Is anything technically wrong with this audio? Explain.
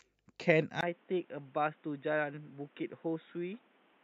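Yes. From 0.81 s to the end, the speech sounds like it has been moved to a poorer input device, likely a switch to another microphone or a headset's call profile. After a brief silence of about 20 ms, nothing is left above 3.8 kHz, the level falls by roughly 5 dB, and a new background noise sits about 30 dB below the speech. The gap and the simultaneous changes in tone, level and noise distinguish this from a plain low-pass filter or codec bandwidth drop.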